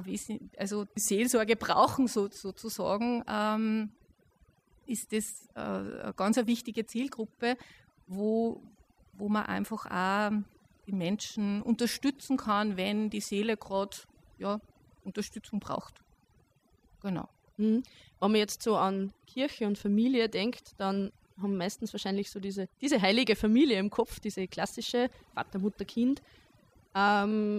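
Overdone noise removal runs through the whole speech clip. A noise reduction stage set too aggressively keeps cutting individual frequency bands wherever they sit close to its noise estimate, taking softer parts of the voice with them. Between phrases the background collapses into near silence scattered with twinkling specks.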